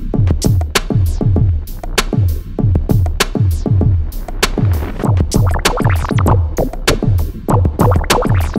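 Listening closely, nothing in the audio stood out as a technical problem at any point.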